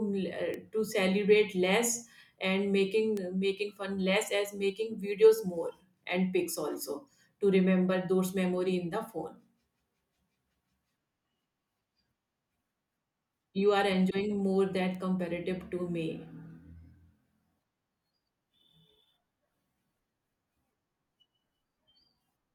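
Three bit error spikes cut into the speech at 0.54 s, just before "to celebrate", at 3.17 s, and at 14.95 s, between "are enjoying more" and "comparative to". Each is one sharp, broadband tick. A single flipped bit briefly throws one or two samples off by a power of two.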